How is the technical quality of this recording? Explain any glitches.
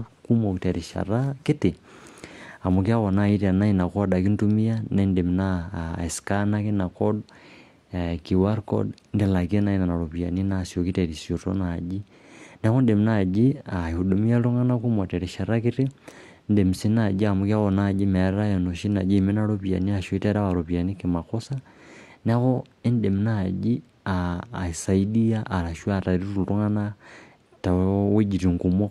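One glitch stands out: an adaptive stream at a lower bitrate between 7.55 and 9.55 s. For those 2 seconds there is more codec smearing, then the sound snaps back without any gap. The sudden drop points to a switch from roughly 64 to 32 kbit/s Opus after the connection slowed. On a spectrogram the change in quality is abrupt at both edges of that stretch, while the waveform stays continuous.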